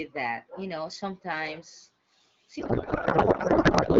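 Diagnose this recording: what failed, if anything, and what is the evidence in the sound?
A codec payload misread starts at 2.59 s and lasts to the end of the clip. Before that point the speech has the clean, slightly band-limited sound of AMR wideband at about 12.65 kbit/s. After it, the speech gives way to garbled noise and warble that barely follows it. The decoder is reading valid frames with the bit fields in the wrong places, which fits octet-aligned AMR being read as bandwidth-efficient. Packet-loss concealment would fade or repeat sound instead.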